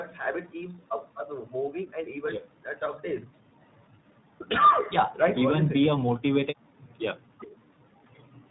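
Tandem speech coding runs throughout. The speech was coded twice, which fits an iLBC stage. It sounds rough, muffled and warbly, with nothing above 3.9 kHz.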